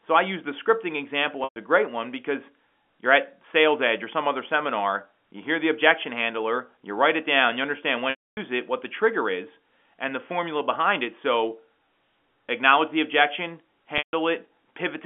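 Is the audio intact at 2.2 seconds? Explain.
Yes, the speech is intact at 2.2 seconds, with no fault at that moment beyond the narrow telephone band of the G.711 line it was carried over.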